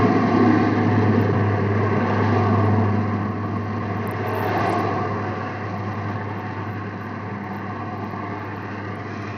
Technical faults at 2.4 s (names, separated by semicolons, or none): Bluetooth SBC compression